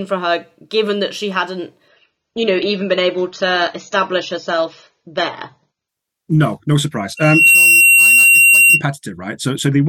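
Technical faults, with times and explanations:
1.88–5.88 s, adaptive stream at a lower bitrate: right after "given that she hadn't" the speech abruptly loses its top end, with nothing audible above about 6.9 kHz, and codec artefacts rise. The player has stepped down to a lower-quality rendition of the stream, which fits a drop from roughly 96 to 24 kbit/s AAC. With fewer bits the encoder discards high frequencies and quantises the rest coarsely. Playback never gaps, and full quality returns just as suddenly at 5.88 s.
7.17–8.82 s, loudspeaker feedback squeal: after "no surprise" a single tone at 2.8 kHz swells over roughly a third of a second and then holds, ending up about 10 dB louder than the speech. The microphone is picking up the loudspeaker it drives, and at 2.8 kHz the round-trip gain exceeds unity, so each pass around the loop reinforces that one frequency until the system limits it. 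The squeal stops at 8.82 s, consistent with the loop being broken.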